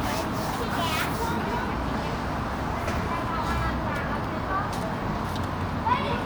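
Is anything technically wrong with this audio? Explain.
No, nothing is technically wrong with this audio.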